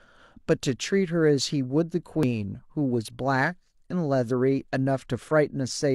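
From the start and across the whole speech recording there is sample clock jitter. The converter's clock wanders by something on the order of a microsecond, so each sample lands slightly off its proper instant. Because the resulting error scales with how fast the waveform is changing, it rides on the louder and brighter parts of the speech as a faint hiss or grain, roughly 45 dB below the signal, and drops away in the pauses.

At 2.23 s comes an overlap between stream segments, lasting about 23 ms until 2.26 s. Two segments, which fit a segment length of around 4 s, carried time stamps that overlapped. The player discarded that span as if it were duplicated, although the material was not actually repeated. That slice of audio is simply gone, and the waveform jumps across the gap, producing a brief click or small skip.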